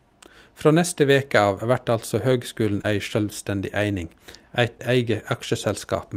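Right after "av vert altså høgskulen", short concealed packet loss runs from 2.81 to 2.86 s, and again from 4.78 to 4.81 s. About 20 ms of audio never arrived in each case. The decoder patched the gaps by extending the preceding sound, which gives a brief smear or wobble. On a spectrogram, the harmonics stretch flat or a blur of noise appears before normal detail resumes.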